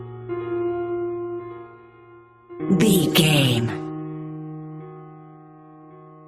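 No technical faults can be heard anywhere in the recording. Nothing interrupts or distorts the sound at any point.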